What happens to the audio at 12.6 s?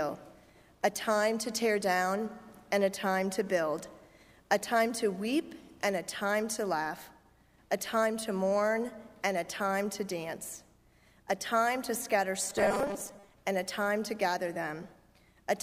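At 12.6 s the audio is in a stretch of robotic sound from repeated short buffers, running from 12.50 to 13.35 s. The likely cause is new audio arriving too slowly, so the playback fills gaps by looping the most recent fragment, with about half of what is heard being repeats. That looping imposes a fixed 200 Hz buzz, which fits a 5 ms buffer, and the sound turns rigid and metallic while loosely tracking the original.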